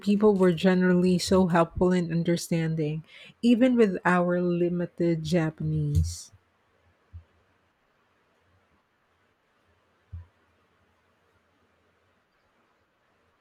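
Nothing technically amiss stood out on listening to this speech recording.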